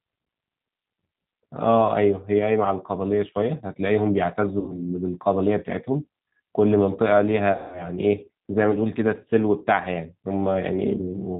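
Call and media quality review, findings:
G.729 codec across the whole speech clip, consistent with 8 kbit/s operation: audio rebuilt from a vocal tract filter, pitch predictor and sparse pulses. Nothing above 4 kHz, plainly audible roughness and a synthetic edge.

VoIP packet loss concealed by the speech codec, at 4.60 to 4.82 s (about 80 ms missing) and 7.52 to 7.88 s (about 200 ms missing). The decoder extends the last pitch and filter with falling gain, producing a fading buzzy tone or coloured noise, then weak, distorted recovery.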